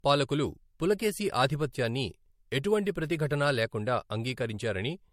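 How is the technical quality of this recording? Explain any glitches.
The quality is degraded throughout by generation loss. Across the whole clip the speech sounds swirly, hollow and smeared. Consonant attacks blur. Nothing reaches above 16.5 kHz. The likely cause is MP3 coding repeated a few times, at a rate that fits 64 kbit/s. Each pass quantises again on a shifted frame grid. Noise and spectral gaps pile up.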